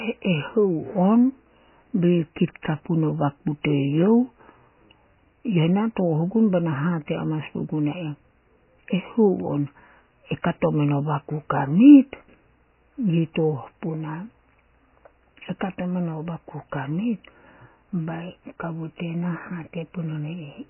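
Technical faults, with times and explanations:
Throughout, MP3 compression: the encoder was likely starved of bits, at a rate that fits roughly 16 kbps, so it cut everything above 3 kHz and dropped the weaker frequency detail, letting it flicker in and out between frames. The speech therefore sounds dull and muffled, with s sounds dulled and blunted, and the heavy damage adds a watery, swirling texture to the vowels and softens the onsets of syllables.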